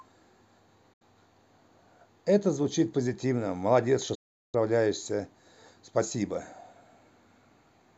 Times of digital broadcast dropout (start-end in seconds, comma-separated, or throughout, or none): 0.93-1.02, 4.15-4.55